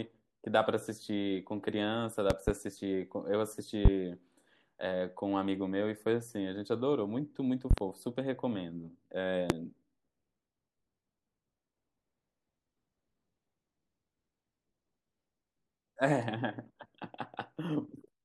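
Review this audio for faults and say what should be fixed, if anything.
Loud pops land at 2.30–2.52 s and 7.71–7.81 s as double pops, and at 3.85 s and 9.50 s as single ones, peaking roughly 20–25 dB above the speech. They are likely voltage spikes from a loose plug or static, and the speech continues underneath rather than dropping out as in a digital glitch. Secure connectors and ground the equipment before recording.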